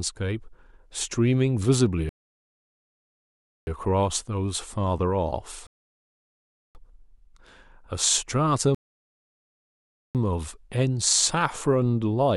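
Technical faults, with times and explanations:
2.09–3.67 s, 5.67–6.75 s, 8.75–10.15 s: rebuffering stall. Playback halts in silence for about 1.6, 1.1 and 1.4 s while data arrives, then the speech resumes exactly where it stopped, with nothing skipped, unlike a dropout.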